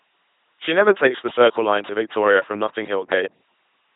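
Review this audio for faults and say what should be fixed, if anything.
The whole clip runs through an LPC-10 vocoder, and the damage is heavy. The speech becomes a buzzing, mechanical robot voice. Each instant is rebuilt from a ten-pole vocal tract filter fed by either a pulse train or noise, and nothing carries above 3.8 kHz. The sound points to a 2.4 kbit/s link. Unlike a CELP codec at low bitrate, which smears and warbles, this buzzes and flips abruptly between pulse and hiss. To prevent it, carry the speech over a modern waveform-matching codec at adequate bitrate instead of LPC-10.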